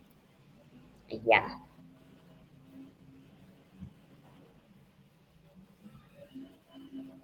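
Right from the start, there's clock drift between sender and receiver. The sending side's clock runs fast, by something like 4 percent, so audio keeps arriving a little quicker than the receiver plays it out. The jitter buffer slowly fills instead of holding steady, and the receiver has to keep compensating for the whole clip. You hear it as a faint unevenness in the pacing of the speech rather than any single glitch.

That compensation shows up as repeated timing corrections from about 0.02 s through 6.99 s, with the receiver effectively working at 104 percent speed to keep up. Because the sender is ahead, these are all cuts: the receiver trims tiny slices of audio to drain the buffer, never repeats. They land at irregular spots, and each one is small, coming across as slight hiccups or a tempo that feels a touch rushed and jerky.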